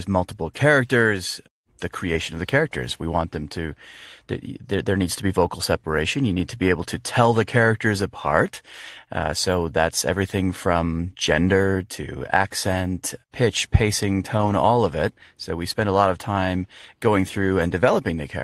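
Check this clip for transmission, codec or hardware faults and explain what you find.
One fault stands out in this speech clip. From 14.37 to 14.51 s there is a lost packet rebuilt from error correction. The missing audio came from low-bitrate copies carried in later packets, which fits about four lost packets. So nothing drops out, but roughly 80 ms sounds rougher and noisier.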